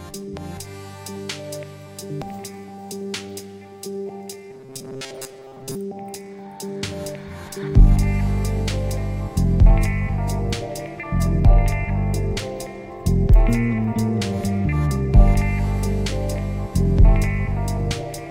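From 4.51 to 5.75 s the sound turns rigid and metallic, with a 134 Hz buzz: robotic sound from repeated short buffers. The likely cause is fresh audio arriving too slowly, so a roughly 7.5 ms fragment was looped, replacing most of the signal.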